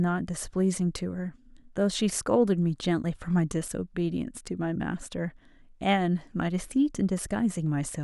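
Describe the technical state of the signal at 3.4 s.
At 3.4 s the speech signal is intact, with no dropout, clipping, distortion or other audible fault at that point.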